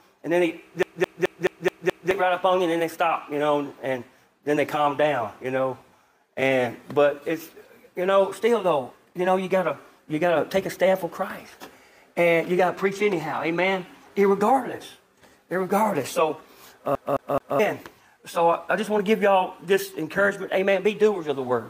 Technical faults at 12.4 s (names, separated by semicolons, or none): none